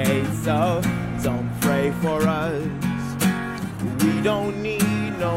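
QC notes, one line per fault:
No faults were heard anywhere in this clip. The sound holds steady, with nothing to flag.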